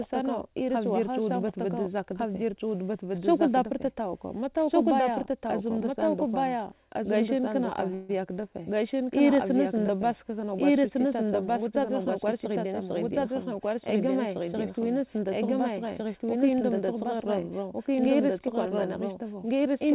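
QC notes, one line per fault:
Throughout: doubled audio track. A second full-band copy of the speech runs about one and a half seconds behind the first at roughly the same level, with no decay or room colour, so every phrase is heard twice as a clean, dry repeat. The likely cause is the signal being captured a second time through a slower path and mixed back in. The band ends at 4 kHz, as expected from the G.711 A-law call path.
7.94–8.11 s: call audio freeze. For about 150 ms the last sound is stretched into a brief fading continuation instead of moving on, and the speech then resumes where it left off with nothing lost. Packets were likely held up in transit, the jitter buffer ran dry and the receiver filled the wait, which shifts everything after this point about 150 ms later.
12.16–12.80 s: jitter buffer speed-up. Over these 0.64 s the speech runs about 7% fast at unchanged pitch, sounding slightly hurried. 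The receiver cut its excess buffering by removing short pitch-period-length pieces in quick succession, some 50 ms in all, which compresses the timing while leaving the pitch intact.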